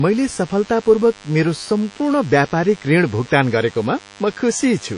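From start to finish, a DECT cordless phone buzz sits under the speech. A cordless handset or base station close to the recording chain transmits a short radio burst every 10 ms, and the audio circuitry rectifies those bursts into the signal. The result is a constant buzz repeating at 100 Hz, rich in harmonics, at roughly 25 dB below the speech. It does not follow the talker and stays present through pauses.

Also across the whole clip is plainly audible codec damage, with a likely cause of WMA compression at a low bitrate, which fits something around 32 kbps. The bandwidth stops at about 10.1 kHz, so the top octave is missing. The transform coder's quantisation noise spreads over tens of milliseconds around each sound, giving a ringing, washy quality and a hiss that rises and falls with the speech rather than staying steady.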